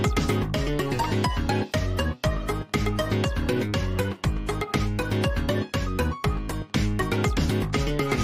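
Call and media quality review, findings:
No audible faults found during review.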